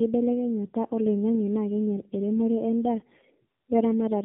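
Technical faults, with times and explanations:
Throughout, tandem speech coding: the speech sounds rough, muffled and warbly, with nothing above 3.7 kHz. It passed through two AMR-NB narrowband coders in a row, near 7.95 and 7.4 kbit/s, with a G.711 mu-law link between them. Each crossing decoded the audio and coded it again. The second AMR-NB coder had to model speech already smeared by the first, so their errors stack and the result is worse than one pass.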